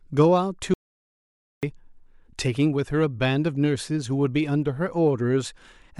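At 0.74 s the speech cuts out abruptly. What follows is an audio dropout to silence lasting until 1.63 s, about 0.89 s. The gap holds silence, with no room tone. The input was likely lost while recording continued. The speech returns mid-flow.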